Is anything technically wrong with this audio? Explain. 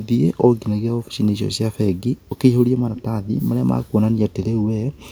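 Yes, there's echo leak in this speech. From 2.19 to 2.39 s a very faint copy trails the talker by 349 ms, then from 2.95 to 3.02 s a much stronger scrap lands 366 ms late, likely a far-end echo canceller letting its speakerphone pickup slip back.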